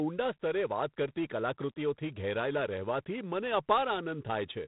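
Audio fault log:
throughout G.726 ADPCM: harsh, rasping hiss tracks the speech level and nothing passes above 3.9 kHz, which fits coarse difference coding at 24 kbit/s.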